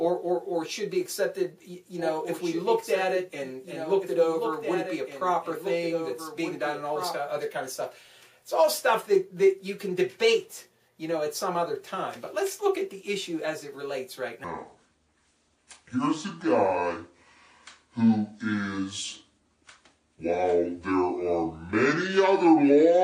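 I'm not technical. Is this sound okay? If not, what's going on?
No. A doubled audio track runs from 1.99 to 7.21 s. A second, quieter copy of the same sound trails about two seconds behind, with no echo tail, and starts and stops abruptly. This is likely a recording captured twice or an edit holding two misaligned copies.

A section at the wrong speed runs from 14.44 s to the end. Everything plays at 0.635 times its proper speed, so it sounds slow and noticeably deeper. This is likely a player or editor using the wrong clock for that part.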